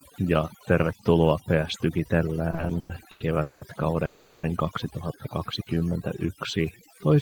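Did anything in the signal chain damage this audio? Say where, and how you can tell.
Yes. Damage shows up in four places, one in call processing and three in the receiving end's jitter buffer.

Overdone noise removal runs through the whole clip, at the call-processing stage. The background has been pushed down and broken up into twinkling, warbling specks rather than a steady floor. The suppressor was set too aggressively, so it cut individual frequency bands hard whenever they sat near its noise estimate, and quieter parts of the speech were removed along with the noise. On a spectrogram the gaps between words look speckled: isolated time-frequency cells flicker on and off against dark holes instead of showing an even noise wash.

Repeated stalls (stutter) run from 2.51 to 3.63 s and come from the network and jitter-buffer stage. Across that span there are seven gaps where packets arrived late and the buffer ran dry. 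The receiver continued the last sound to fill about 460 ms in total, which is 41% of that stretch. The longest fill is 190 ms. Nothing is actually lost, but the speech drags and hiccups. On the waveform this appears as repeated, smeared, sustained segments, and on the spectrogram as frozen, flat spectral slices between normal speech.

A call audio freeze sits between 4.05 and 4.45 s. About 380 ms of continued sound is inserted as a decaying buzz or hiss. It never reaches silence, and then the speech resumes exactly where it stopped, so nothing is missing and the timeline is pushed back by 380 ms. The likely cause is packets held up in transit emptying the jitter buffer. The spectrogram shows a horizontally stretched, fading copy of the last frame, and the waveform shows a tapering envelope with no true dropout.

A jitter buffer slow-down runs from 5.46 to 7.00 s. The receiver was rebuilding its reserve by repeating single pitch periods and scraps of pauses, which adds about 160 ms and plays that section at 90% speed without changing pitch. 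You hear drawn-out sounds and the pacing sagging. On a spectrogram the harmonics stay at the same spacing while syllables stretch horizontally, and the waveform shows near-identical periods repeated back to back.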